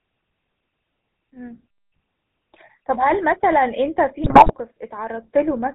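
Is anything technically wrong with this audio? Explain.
Yes, there are two faults.

Throughout, the speech carries GSM full-rate codec damage. The codec models the vocal tract and drives it with a sparse, regularly spaced pulse excitation, at a rate that fits a 13 kbps stream. Nothing above 4 kHz survives, and the result is a plainly audible buzzy, gravelly roughness. Unlike ordinary low-pass band-limiting, the grit sits inside the voice itself.

From 4.24 to 4.55 s, GSM bit errors break in. Corrupted filter, pitch and gain values reach the decoder, so the spectrum bends and the level jumps from one frame to the next, producing squawks, pops and gargling. Unlike packet loss, the sound never drops out; it turns garbled.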